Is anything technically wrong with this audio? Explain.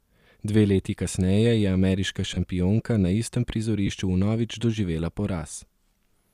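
Yes. The speech has two brief dropouts from lost LE Audio frames, and a faint grainy edge in the upper band likely comes from light LC3 coding. The first dropout runs from 2.34 to 2.38 s, about 30 ms. The second runs from 3.87 to 3.89 s, about 15 ms, between "na istem" and "vnovič doživela". The lengths fit whole 7.5 ms frames going missing on the link. The decoder conceals each gap by repeating the last spectrum with scrambled phase signs, so instead of silence there is a short noisy smear where the voice loses its clear pitch for an instant.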